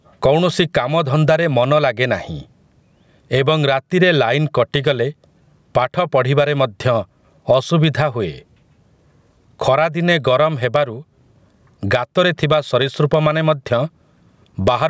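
From start to finish the speech has gain pumping, a swing of something like 20 dB. The likely cause is the input gain being set far too hot, with a fast limiter or compressor clamping down on every peak. Loud and quiet passages end up squeezed together, so it sounds squashed, even through the call-style band that tops out around 8 kHz.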